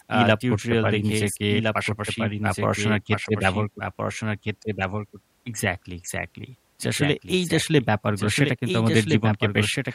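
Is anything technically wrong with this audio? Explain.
Yes. A doubled audio track runs throughout: a second full-band copy of the speech trails the original by roughly one and a half seconds, about 5 dB quieter, with no decay or room colour. This likely comes from the signal being captured again through a slower path.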